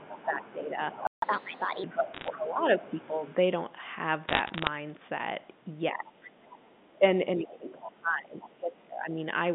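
From 0.0 to 3.4 s the speech is suppressed in double talk. It dips by roughly 10 dB. The echo canceller likely turned down both voices at once.

From 0.12 to 3.34 s the other side's voice leaks through. It is a faint second voice about 20 dB below the speech. Residual loudspeaker echo is the likely cause.

At 1.07 s a playback stall silences the sound for 153 ms. The player likely ran dry or was blocked.

From 1.22 to 1.84 s comes catch-up at higher speed. Playback runs 1.25 times fast, and pitch rises about four semitones. Then it settles back to normal.

Bit errors on a digital phone line cause sharp ticks from 2.14 to 2.28 s. A longer crackle follows from 4.28 to 4.67 s. Each flipped bit corrupts a single sample.

From 5.92 to 9.17 s the double-talk suppression returns, deeper this time. The drop reaches roughly 20 dB. This is likely the canceller ducking both sides again.

The other side's voice leaks through twice more. 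From 6.24 to 6.88 s it sits about 20 dB down. From 7.49 to 8.47 s it is louder, about 15 dB down. Both stretches likely come from uncancelled loudspeaker echo.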